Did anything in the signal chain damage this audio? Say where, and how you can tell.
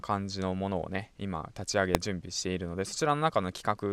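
Yes. At 1.95 s the speech is hit by a single sharp bang: invalid numbers at full scale from the processing stage. A calculation went infinite or invalid, pinning a block of about 0.67 ms to one extreme value.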